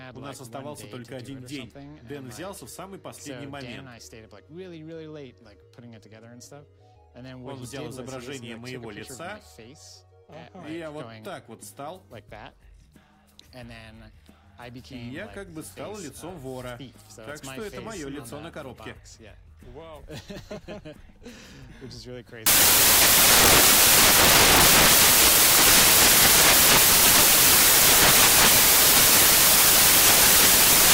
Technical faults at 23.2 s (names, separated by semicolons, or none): samples built from the wrong bytes